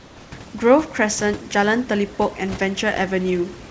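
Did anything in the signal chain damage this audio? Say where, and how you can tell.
Yes. The damage comes from the call-processing stage, in two forms.

Overdone noise removal runs through the whole clip. The suppressor was set so aggressively that frequency bands near its noise estimate are pushed down or switched off, taking quiet parts of the speech with them. The background sinks toward silence with twinkling specks. This is different from the G.722 band limit, which removes everything above 8 kHz cleanly and steadily. Here, individual bands flutter on and off.

Comfort noise in place of the background fills the opening 0.0 to 0.32 s. Before the speech begins, the real room background, about 25 dB below the loud parts, is replaced by a steady, smoother hiss about 2 dB quieter. This is likely discontinuous transmission: the sender went silent and the receiver synthesised noise shaped like the background. 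Unlike the suppressor's twinkling residue, this noise is smoother, and it is confined to that pause.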